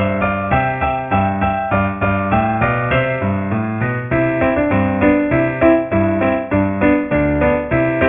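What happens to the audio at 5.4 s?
At 5.4 s the audio has aliasing, which runs through the whole clip. The sound was brought down to a low sample rate, which fits a drop to 6 kHz, without filtering first. Content above 3 kHz folds back as false tones roughly 15 dB below the signal, giving a gritty, metallic edge.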